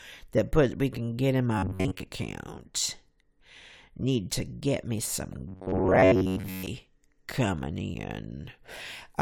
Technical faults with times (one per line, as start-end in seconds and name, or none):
1.58-2.06 robotic sound from repeated short buffers
5.48-6.66 robotic sound from repeated short buffers